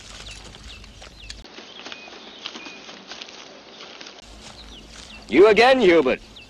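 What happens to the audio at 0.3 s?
Nothing goes wrong at 0.3 s: the audio runs on intact through that moment, with no dropout, click or distortion to be heard.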